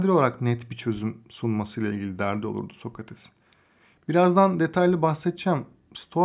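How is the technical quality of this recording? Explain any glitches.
No audible technical faults.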